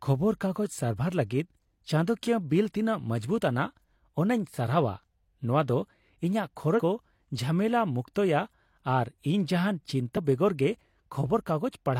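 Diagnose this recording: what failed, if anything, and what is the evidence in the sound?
The failure is in the codec stage: compressed frames skipped. At 6.74 to 6.80 s the speech jumps forward by roughly three frames, about 150 ms of audio, and at 10.13 to 10.18 s by about one frame, roughly 50 ms. The frame length is 46.4 ms. Those frames were missing or rejected by the decoder as damaged. Each join jumps straight on rather than leaving a silent gap as in a buffer dropout.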